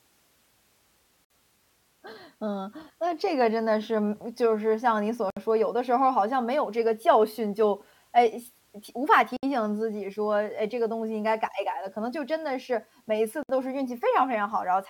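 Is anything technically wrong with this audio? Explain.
Yes. The speech has a gap at a join of encoded pieces, recurring every 4 s, at 1.25, 5.30, 9.37 and 13.43 s. Separately encoded pieces were joined untrimmed, leaving encoder delay and end padding. Each gap is 56 to 64 ms, with smeared edges so the silent part is shorter, and then the sound resumes.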